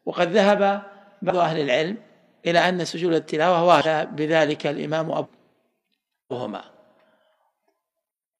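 Four short bursts of damaged data in a compressed stream occur at 1.26–1.31 s, 3.81–3.87 s, 5.21–5.27 s and 6.27–6.33 s, each lasting roughly 55 to 60 ms. At each point the decoder hits corrupted frames, loses sync and hunts for the next valid header, producing a brief chirp or squawk.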